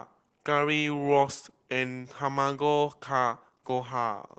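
Throughout the speech, Opus voice compression is plainly audible: the SILK coder keeps only a wideband range up to about 8 kHz and codes the excitation coarsely, which fits a rate near 12 kbps. Voices sound muffled, hoarse and faintly robotic, unlike simple low-pass filtering, which dulls without roughness.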